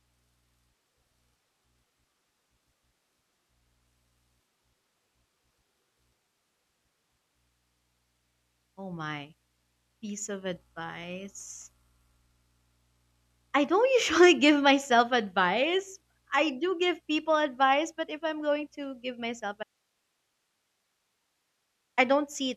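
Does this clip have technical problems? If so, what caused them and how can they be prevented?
Yes. Right after "going to give myself", the speech cuts out abruptly at 19.63 s and returns at 21.98 s. That leaves 2.34 s of faint hiss far below the speech level. This audio dropout to a faint residue likely comes from the signal feed breaking while the recording path stayed live, so only its own noise floor was captured. Securing cables and connectors and monitoring the input throughout recording would prevent it.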